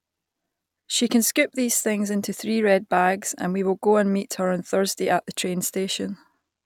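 No technical faults are audible anywhere in this speech.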